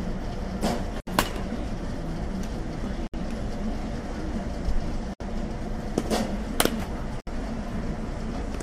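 Gaps at joins of encoded pieces at 1.00, 3.07, 5.14 and 7.20 s: separately encoded segments were butted together untrimmed, leaving roughly 67 ms silences with smeared edges.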